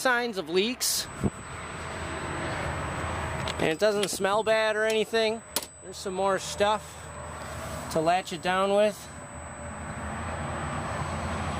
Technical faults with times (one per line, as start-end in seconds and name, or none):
1.05-11.60 USB whine